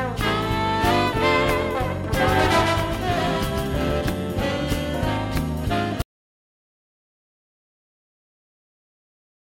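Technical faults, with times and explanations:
2.13 to 4.01 s, doubled audio track: a second full-band copy of the sound trails the first by roughly 150 ms, a little quieter, perhaps 5 dB down. It is likely captured twice or held out of step by an edit. The copy starts and stops abruptly, with no decay or room colour. On the waveform every transient shows a dry repeat just behind it, and the spectrogram shows each event smeared into a doubled, identical shadow.
6.02 s to the end, audio dropout to silence: the sound cuts off mid-flow into silence, with no room tone left, and never returns. This is likely a lost input, with the recorder still writing silence. The waveform goes to a flat line, and the spectrogram turns uniformly blank from that point.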